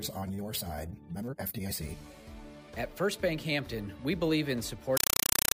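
A compressed stream played as audio takes over at 4.97 s and runs to the end at 5.56 s: the sound is replaced by very loud, chattering static. An encoded AC-3 (Dolby Digital) bitstream is being treated as ordinary samples instead of being decoded, so each data frame comes out as a 5.33 ms burst of noise followed by silent padding, repeating 31.25 times a second. The density of the bursts fits a 256 kbps stream.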